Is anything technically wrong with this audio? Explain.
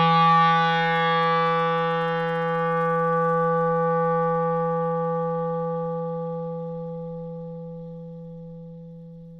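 No, nothing technically wrong can be heard in this recording of sounds. There is no fault to report at any point in the clip.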